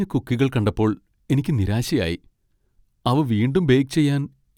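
A speech recording with nothing technically wrong to hear in it.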